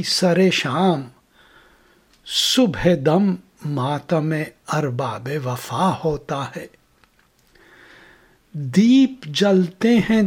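No technical faults can be heard anywhere in this audio.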